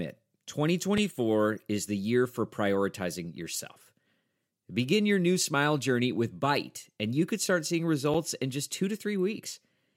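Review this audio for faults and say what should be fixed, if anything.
Two blocks of digital silence occur, at 0.98 s and 8.14 s. They last about 4.4 ms and 6.3 ms. The speech drops straight to silence and returns with no fade. Both gaps are under 15 ms, so each sounds like a tick or dip rather than silence.

To prevent this, give the audio processing enough buffer headroom so every output block is filled in time, and guard against invalid values in the calculations.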